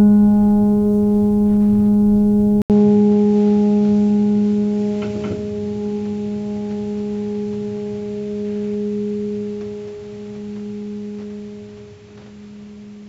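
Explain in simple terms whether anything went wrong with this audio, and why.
At 2.62 s the music cuts out briefly. It returns duller, with nothing above 7.6 kHz. The input likely switched to a poorer device.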